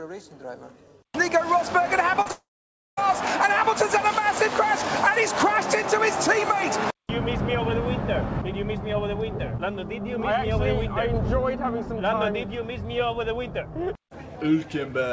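At 2.22 s and again at 2.27 s, short concealed packet loss: roughly 40 ms and then 20 ms of audio arrived too late for the decoder, so the receiver stretched the preceding sound to fill each gap. Each comes through as a brief smear or wobble before the real signal blends back.

From 2.31 s to 2.99 s there is a long network dropout, the likely cause of a roughly two-thirds-of-a-second hole. Concealment carries the last sound on as a fading buzz or hiss, then about half a second of silence follows, and the audio resumes at 2.99 s with that stretch missing, still limited to nothing above 8 kHz by the call codec.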